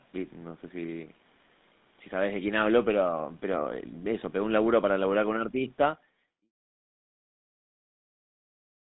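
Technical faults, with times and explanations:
Throughout: GSM full-rate codec. The speech went through the original GSM coder, which models the vocal tract and drives it with a thinned, regularly pulsed excitation at a rate that fits 13 kbps. This leaves a plainly audible buzzy, gravelly roughness, and the line band confines it to 150 Hz to 3.7 kHz.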